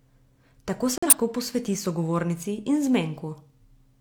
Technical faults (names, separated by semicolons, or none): corrupt frame muted